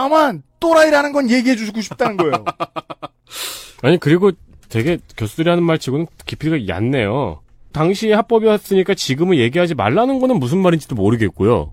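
Speech recording with no technical faults audible at any point.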